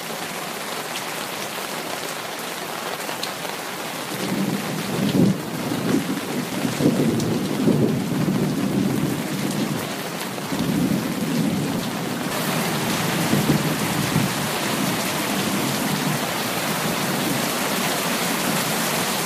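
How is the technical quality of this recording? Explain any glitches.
The recording has one glitch, a brief burst of damaged data in a compressed stream at about 1.79 s. At that point part of the encoded data was corrupted, so the decoder misread the frame, lost sync and skipped ahead to the next valid frame header. It is heard as a short chirp or blip. On a spectrogram it shows as a thin vertical smear of broadband or oddly tonal energy. In the waveform it appears as an abrupt discontinuity where the signal shape breaks.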